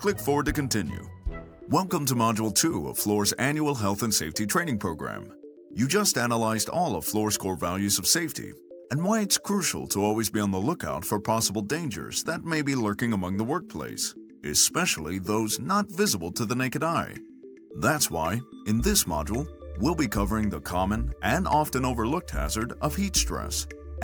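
No technical fault can be heard anywhere in the audio. There is no event here that needs a time or an explanation.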